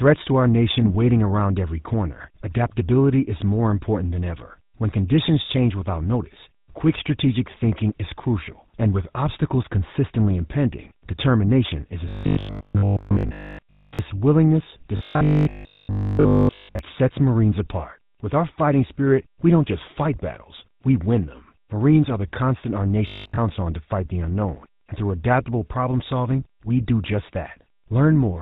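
The whole speech clip carries GSM full-rate codec damage. Nothing passes above 4 kHz, and the voice sounds plainly buzzy and gravelly, which fits 13 kbps coding. From 0.78 to 0.97 s, GSM bit errors corrupt the decoder's parameters. The spectrum bends and the level jumps, giving squawks and gargling. Robotic sound from repeated short buffers appears at 12.09 to 13.99 s, 14.97 to 16.79 s and 23.1 to 23.4 s. A rigid 50 Hz metallic buzz runs through these stretches, likely from a 20 ms buffer being replayed. Most of the first and last stretches are repeated, and all of the middle one.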